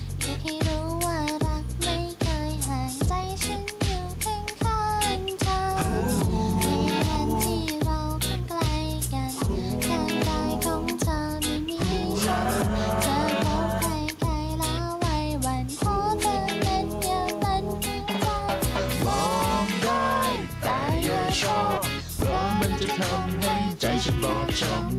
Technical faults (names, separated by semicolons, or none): gain pumping